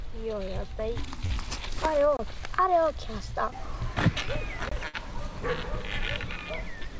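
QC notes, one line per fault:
1.26–1.32 s, short concealed packet loss: about 40 ms never arrived in time. The receiver extended the preceding sound to cover it, leaving a brief smear.
2.17 s and 4.69 s, gap between chunks: hard-edged holes of about 23 ms recur every 2.5 s. Silence sits between chunks at each join, interrupting the sound.
4.88–4.95 s, burst of packet loss: about 60 ms went missing. The last sound was stretched and faded across the hole, then the audio jumps ahead.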